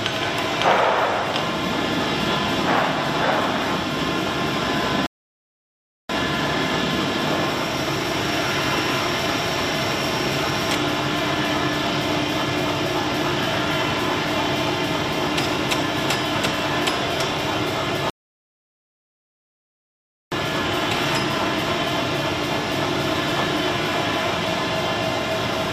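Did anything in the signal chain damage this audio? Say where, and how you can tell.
Yes, playback stalled twice while the audio was streaming. This is a rebuffering stall. The sound drops to silence at 5.06 s and comes back at 6.09 s, adding about 1.03 s. It stops again from 18.10 s to 20.32 s, adding about 2.22 s. Each time the audio resumes exactly where it broke off, with nothing skipped. The player ran out of downloaded audio and waited for more data to arrive.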